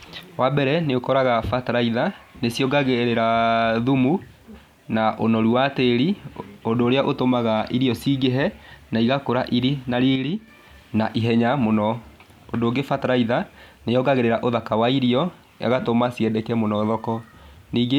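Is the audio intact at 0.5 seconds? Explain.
Yes, at 0.5 seconds the speech runs cleanly, with no dropout, click, distortion or other fault to be heard at that point.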